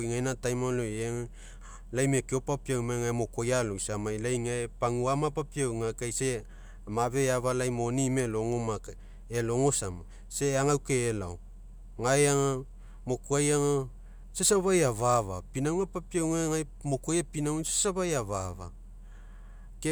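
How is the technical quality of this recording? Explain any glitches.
No technical faults are audible anywhere in the recording.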